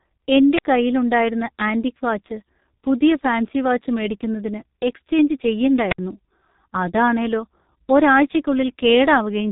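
From the start and across the whole speech clip, the G.723.1 codec has done heavy damage. Nothing above about 3.8 kHz gets through, so the voice is dull, and a slow-updating, coarse model of the vocal tract makes it rasp and smears the consonants. This fits the roughly 6.3 kbit/s mode. A plain low-pass filter would only muffle; this also roughens the voicing.

At 0.56 to 0.64 s comes a wireless microphone squelch dropout. The FM link fades, hiss swells briefly, and then the receiver mutes the output for about 52 ms before the voice returns. A second squelch dropout at 5.89 to 5.99 s, right after "ഫാൻസി വാച്ച് മേടിക്കുന്നതിന് എക്സ്ചെയ്ഞ്ച്", holds the mute for about 67 ms. The rising static before each silence sets these apart from codec packet loss, which cuts abruptly or is smoothed over without any noise lead-in.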